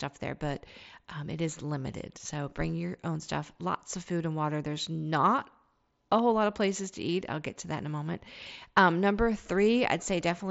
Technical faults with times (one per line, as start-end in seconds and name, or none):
none